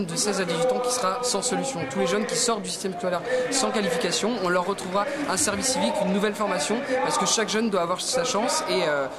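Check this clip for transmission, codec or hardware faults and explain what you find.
Nothing wrong turned up anywhere in this recording.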